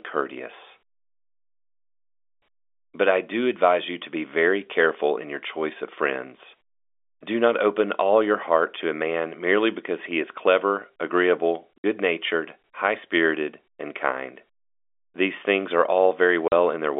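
Packet loss filled with silence hits at 11.78 s, a 60 ms hole between "he is clever agreeable" and "natured high spirited and", and again at 16.48 s for 40 ms. Missing packets were replaced by silence, which fits 20 ms packets, so the telephone-band speech drops out abruptly with hard edges.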